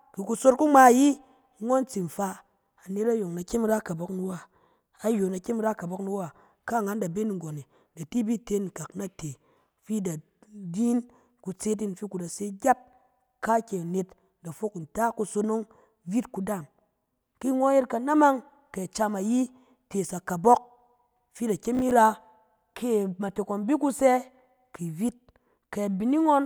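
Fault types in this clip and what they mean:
Processor overload crackle: the processor fell behind and missed several deadlines for small audio buffers of around ten milliseconds each, so stale fragments of old audio replayed with hard edges, heard as a short gritty crackle over the speech from 21.75 to 21.91 s.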